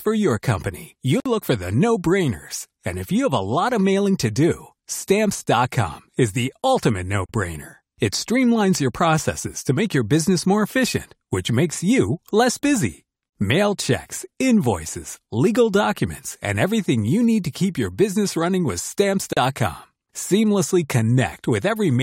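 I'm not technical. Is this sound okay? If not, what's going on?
No. The speech stops briefly four times, at 1.20, 7.26, 13.29 and 19.33 seconds, a gap at a join of encoded pieces. The file was built from separately encoded chunks whose silent padding was never trimmed, leaving 55 milliseconds after "for your company" and about 37 milliseconds after "is the ultimate no" and "your business running with". Unlike a network dropout, these come at a steady six-second spacing and nothing is lost.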